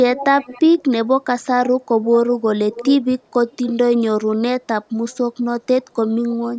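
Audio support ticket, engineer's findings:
Repeats of the speech 10 to 35 dB below it at 0.15, 0.41, 0.77, 2.72, 3.51 and 5.09 s, trailing by 493 ms, later 532 ms. Echo leak, likely far-end loudspeaker pickup the echo canceller failed to remove.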